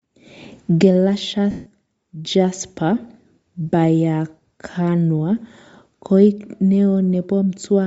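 A speech recording carries plainly audible codec damage throughout, likely from Bluetooth LC3 compression at a rate that fits about 32 kbps in 10 ms frames. The upper spectrum sounds thinned and noise-filled, giving the voice a breathy, grainy edge; a spectrogram would show sparse, speckled high-frequency content instead of clean harmonics. From 1.51 to 1.67 s, lost LE Audio frames leave a 150 ms gap, which fits roughly fifteen 10 ms frames. The decoder repeats the last spectrum with scrambled phase, so the sound smears into noise and fades. On a spectrogram this appears as a blurred, featureless block, and on the waveform as a shrinking, noisy envelope.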